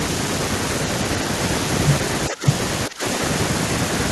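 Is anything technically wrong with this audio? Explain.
Yes. The speech dips twice, from 2.29 to 2.46 s and from 2.88 to 3.04 s, falling about 15 dB and then about 20 dB. This is likely speech suppressed in double talk. An echo canceller confused both talkers and turned the near speech down.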